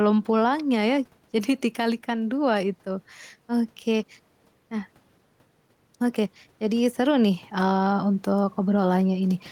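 Gain pumping runs through the whole clip. The room noise sits about 39 dB under the speech, and the gain swings roughly 5 dB. The input gain was likely set too high, with a fast limiter clamping each peak, leaving the speech squashed.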